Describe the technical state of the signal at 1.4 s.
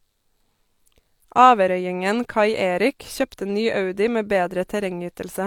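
At 1.4 s the speech signal is intact, with no dropout, clipping, glitch or other audible fault at that moment.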